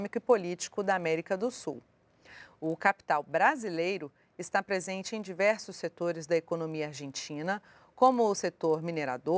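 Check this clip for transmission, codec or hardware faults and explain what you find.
One fault runs throughout the clip: a resampler restarted on every block. The conversion, consistent with 24 kHz down to 16 kHz, handled each 20 ms block in isolation, so every edge lacks true neighbouring samples and carries a small error. This produces a 50 Hz buzz. Unlike mains hum, it vanishes whenever the signal stops.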